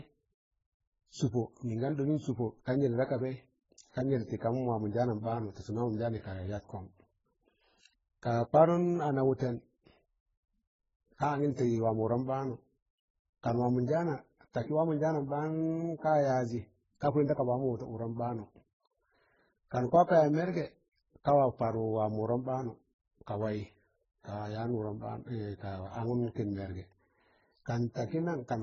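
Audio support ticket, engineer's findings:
Speech dull and muffled throughout, nothing above 7.6 kHz. Likely transcoding between lossy codecs: a very low-rate AAC-type encode, then MP3 re-encoding it and stacking its own artefacts on the first. Warbly, watery swirl plus smeared pre-echo around consonants, heard together. Spectrogram: hard flat ceiling at 7.6 kHz, patchy holes and blocky smearing below it. Waveform: unremarkable.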